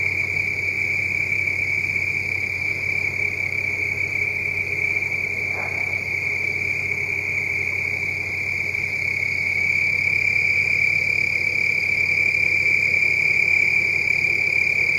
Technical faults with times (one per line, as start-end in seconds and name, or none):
none